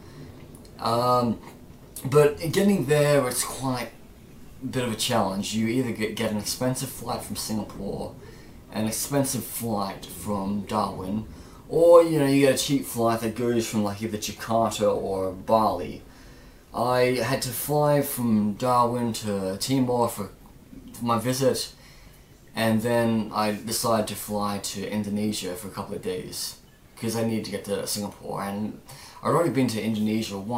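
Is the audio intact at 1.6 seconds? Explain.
Yes, the audio is intact at 1.6 seconds, with no fault audible at that moment.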